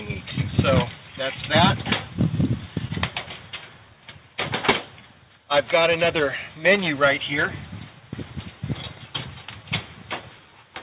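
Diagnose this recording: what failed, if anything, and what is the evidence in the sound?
The fault sits at the buffer stage of the call path: clock drift between sender and receiver. The sender's clock runs about one and a half percent slow, so the receiver's jitter buffer keeps draining and must be topped up throughout. On a waveform this shows as small seams where short segments recur; on a spectrogram, as faint vertical discontinuities at uneven spacing. The G.711 A-law path itself is visible as a clean band edge at 4 kHz.

The repeated timing corrections run from 3.5 s to 10.47 s. They are the receiver's response to the slow sender: it repeats or stretches short pieces so playback runs at 98% speed, adding roughly a tenth of a second over the stretch. Each edit is small. On a spectrogram, harmonics and onsets appear subtly elongated, and the waveform shows duplicated cycles at irregular intervals.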